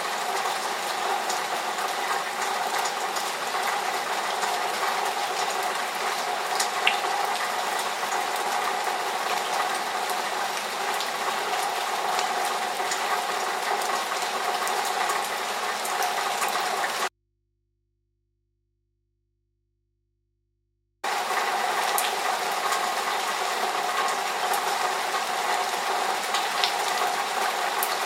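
Everyday-sound recording with an audio dropout to a faint residue from 17.08 to 21.04 s: the signal cuts abruptly for about 4 s, leaving only mains hum roughly 50 dB down, likely from a momentarily open input.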